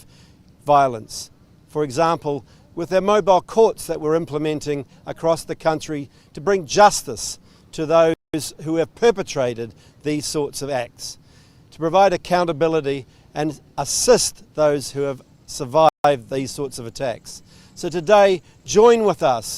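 At 8.14 s the audio cuts out mid-flow for about 200 ms, then carries on at 8.34 s; at 15.89 s it drops out again for about 156 ms, returning at 16.04 s. Both gaps are playback stalls, likely the player running short of data or its thread being blocked, so nothing reached the output until it recovered. Each is heard as an abrupt silence in continuous sound.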